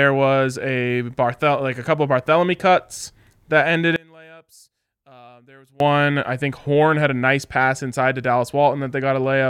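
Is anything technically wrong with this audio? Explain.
Yes. From 3.96 to 5.80 s, after "cuts that ended" and before "I think", one channel inverted is the likely cause: summed to mono, the shared speech cancels, dropping about 28 dB to a faint trace.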